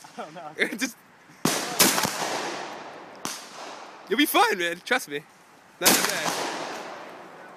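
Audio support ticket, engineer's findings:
Listened through the whole clip and found nothing to flag, so no fault to report on this ticket.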